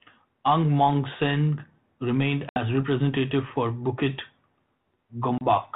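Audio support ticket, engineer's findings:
Packet loss on an ADPCM call: hard-edged dropouts at 2.49–2.59 s, about 70 ms gone, roughly seven packets, speech resuming on "representative for", and 5.38–5.44 s, about 30 ms. The decoder's predictor and step size lose track of the sender's, so speech returns slightly distorted before settling. Light G.726 coding underneath, consistent with 32 kbit/s.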